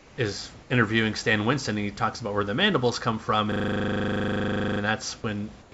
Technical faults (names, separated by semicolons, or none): comfort noise in place of the background; system hang loop